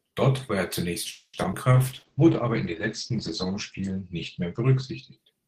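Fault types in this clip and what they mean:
Call audio freeze: at 1.11 to 1.35 s the sound stalls for about 0.24 s, the last sound carried on and fading into a brief silence, likely because packets were held up and the receiver's buffer ran dry; playback then resumes where it stopped, adding delay without losing anything.
Short concealed packet loss: at 1.43 s and again at 1.52 s, a few hundredths of a second of audio never arrived in time, so the receiver bridged each hole by extending the preceding sound and blending back, heard as a quick smear or wobble.
Call bitrate drop: from 1.73 s to the end the encoder was forced from 32 kbps down to 11 kbps, coding more coarsely and cutting the bandwidth from 20 kHz to 8 kHz, so the sound turns rough and muffled for the rest of the clip.
Jitter buffer slow-down: between 3.12 and 3.82 s the receiver rebuilt its reserve by repeating small slices of the waveform, stretching the audio by 40 ms to about 96% speed, so sounds are slightly drawn out while pitch stays unchanged.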